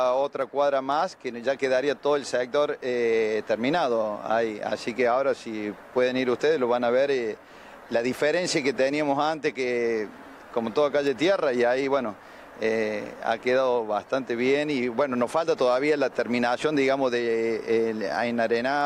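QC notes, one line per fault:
0.42 s, dropped samples: a single sharp click where the waveform jumps ahead, likely a handful of missing samples, a fraction of a millisecond, too brief to lose any sound.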